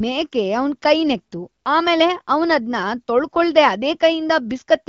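No technical faults are audible.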